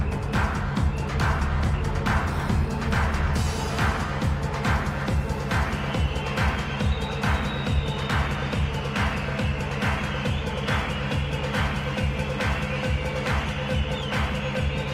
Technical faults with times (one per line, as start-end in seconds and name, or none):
none